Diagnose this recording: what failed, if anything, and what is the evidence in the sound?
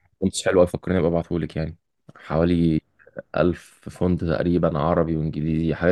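Nothing in the capture, conversion, processing, transmission or playback chain shows audible failure, with no dropouts, clicks, clipping, distortion or timing breaks anywhere in the speech.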